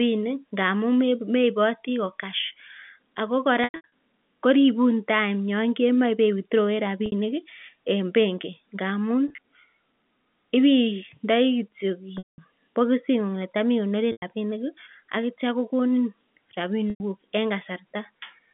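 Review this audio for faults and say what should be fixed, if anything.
Packet loss with pitch repetition at 3.64–3.89 s (before "koribun time"), 7.06–7.12 s, 9.28–9.38 s (after "en benki ngamun"), 12.18–12.38 s, 14.12–14.22 s (before "rabinik ak kityo kogonin") and 16.90–17.00 s. The receiver loops the last pitch period, so the gaps sound held and buzzy, and the longer ones fade toward silence. Add forward error correction and a deeper jitter buffer to prevent it.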